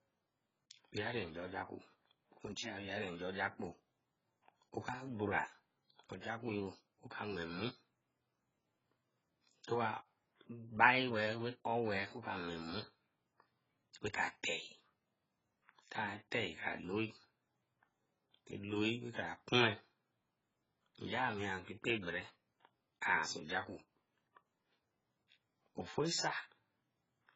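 Throughout, the speech sounds dull and warbly, with nothing above 7.6 kHz; the likely cause is heavy AAC compression at a bitrate near 12 kbps.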